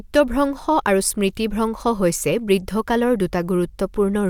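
No technical faults can be heard at any point in this speech recording.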